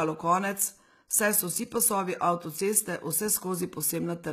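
HE-AAC compression, from start to finish: the treble sounds bright yet synthetic, with s sounds coming out gritty and lispy, and nothing reaches past 14.9 kHz. This is likely HE-AAC at a low bitrate, and the damage fits something near 20 kbps. The codec spends its bits only on the lower spectrum and fills in the highs by copying lower bands upward under a coarse envelope, so the rebuilt harmonics fail to line up across the crossover.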